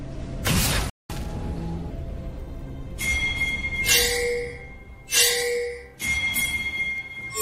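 From 0.90 to 1.10 s a playback stall cuts the sound to silence for about 200 ms, likely from the player running out of data. It resumes where it stopped, unlike a dropout that skips ahead. Between 1.10 and 1.90 s comes catch-up at higher speed: playback runs at 1.25 times normal, raising pitch roughly four semitones. Unlike a plain pitch shift, the tempo rises too, then both settle back.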